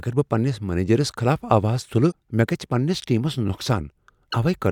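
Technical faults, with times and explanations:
2.08 to 2.13 s and 4.27 to 4.34 s, damaged data in a compressed stream: In both spots, part of the encoded speech was corrupted, so the decoder misread the affected frames and lost synchronisation while it searched for the next valid frame header. What comes out is a chirp, squawk, click or short hole, about 50 ms long the first time and about 65 ms the second, where the speech briefly breaks before decoding recovers.
3.45 to 3.49 s, chunks out of order: Within this 40 ms stretch, one 10 ms chunk of speech arrived or was written three chunks late and plays after the material that should follow it. No audio is missing, but the sequence is scrambled, creating three hard joins where the waveform jumps between non-adjacent segments. Together they make a brief garbled, jumbled moment in the speech.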